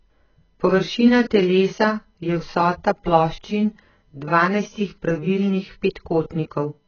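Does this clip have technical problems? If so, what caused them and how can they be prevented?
Yes. Throughout the speech, the audio is dull and smeared, with a watery, warbling texture on vowels and fizzy sibilants. The likely cause is heavy AAC compression (AAC-LC) at a very low bitrate, roughly 14 kbps. To save bits, the encoder discarded everything above 6.8 kHz and coarsely quantised what remained. On a spectrogram this appears as a hard ceiling at 6.8 kHz. The waveform itself looks ordinary. To prevent it, encode at a higher bitrate, around 64 kbps or more for speech, or keep an uncompressed master.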